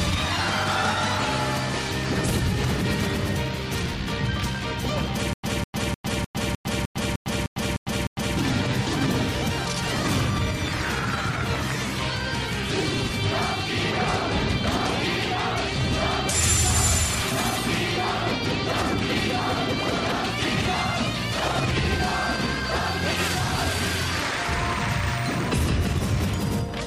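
From 5.33 to 8.37 s there is a stutter with silent gaps. A 200 ms burst of sound repeats 10 times, each followed by about 104 ms of dead silence, every 304 ms. The player likely stalled, replaying its last fragment on each retry. The audio meant for that span is missing.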